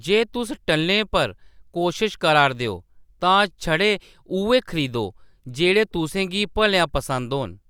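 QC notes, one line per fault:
No faults were detected on listening to this speech recording.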